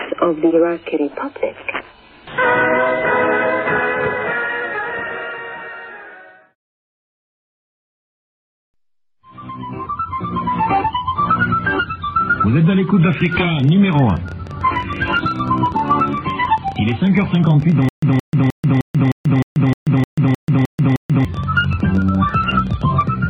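From 13.13 s to 23.08 s a train of clicks runs over the sound: around 150 sharp ticks at about 13.1 per second, unevenly spaced, each reaching roughly the level of the sound itself, and audible in quiet stretches too. The likely cause is interference from nearby equipment or a faulty connection or power supply injecting pulses. On a spectrogram they appear as thin vertical lines spanning the full frequency range. In the waveform they are needle-like spikes of near-identical shape.

Overlapping this, from 17.89 s to 21.25 s, the playback shows a stutter with silent gaps. A 0.17 s fragment repeats 11 times, each followed by 0.14 s of digital silence, so it cycles every 0.31 s. The likely cause is a stalled player or stream that replayed its last buffered chunk on each retry and then ran dry. The audio that belonged in that span is lost. The waveform shows identical blocks separated by flat silent stretches, and the spectrogram shows repeating patches broken by empty bands.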